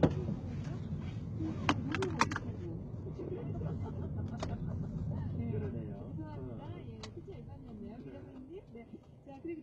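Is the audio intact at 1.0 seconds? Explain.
No. At 1.0 s, as across the whole clip, the audio carries heavy damage consistent with HE-AAC compression, likely at a very low bitrate around 16 kbps. Only the lower spectrum is coded directly; the treble is synthesized by copying lower bands upward and fitting them to a coarse envelope. The top end stays bright, but its harmonics do not line up with those below the crossover, so the high frequencies sound gritty and metallic.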